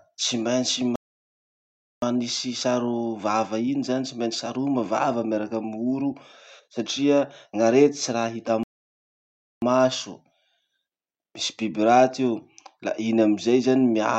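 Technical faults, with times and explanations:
0.96–2.02 s and 8.63–9.62 s, playback stall: the speech cuts out mid-flow into silence lasting about 1.07 s and then 0.99 s before resuming. This is likely the player running short of buffered data or its output thread being blocked until recovery.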